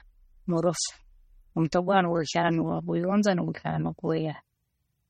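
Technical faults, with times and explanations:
Throughout, MP3 compression: the audio was likely squeezed through an MP3 encoder starved of bits, consistent with a rate near 32 kbps, so nothing survives above 16.5 kHz and weak frequency lines flicker between frames, giving the speech a plainly audible watery, swirling texture with smeared onsets.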